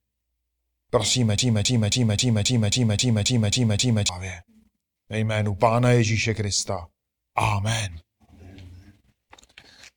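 From 1.38 s to 4.09 s the speech falls into a broken-record loop: a fragment of about 0.27 s plays back to back ten times, each repeat identical, giving a rigid stuttering pattern with no variation between cycles. The likely cause is a stall in the player, encoder or stream, which kept re-sending the last buffered fragment instead of new audio. Whatever should have been heard during those seconds is missing, and the speech resumes only after the loop ends.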